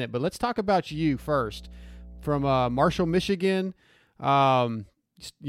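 Mains hum runs from 0.90 to 3.29 s, a steady 60 Hz tone with low harmonics sitting roughly 20 dB under the speech. A ground loop or nearby transformer has let the power line leak into the signal path, leaving a constant buzz beneath the speech.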